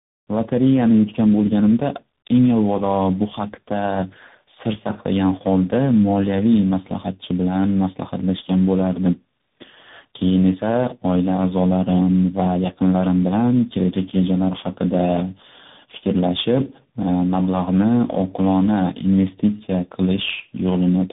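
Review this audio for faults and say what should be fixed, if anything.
Tandem speech coding runs throughout: the rough, muffled, warbly speech sounds like three successive speech coders, each re-coding the last. A spectrogram shows smeared harmonics and nothing above 3.8 kHz. To prevent it, keep the call in one codec end to end, or pass coded frames through transcoder-free.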